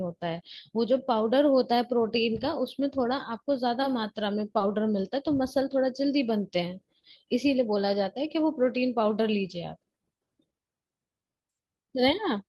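Short concealed packet loss at 4.58 to 4.61 s: about 20 ms of speech arrived too late, so the receiver extended the preceding sound, leaving a brief smear.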